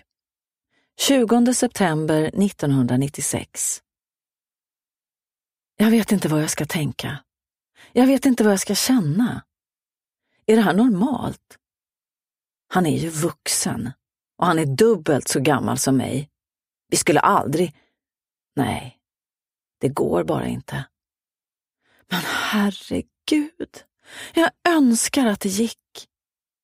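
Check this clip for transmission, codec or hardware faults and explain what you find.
No transmission, codec or hardware fault can be heard anywhere in the clip. Nothing in the sound points to trouble in how it was carried, encoded or captured.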